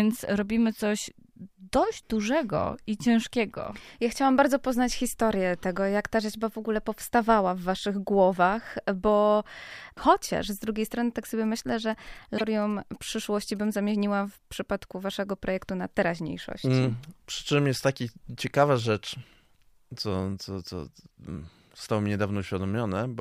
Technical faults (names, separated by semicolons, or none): GSM signalling bursts; broken MP3 bit reservoir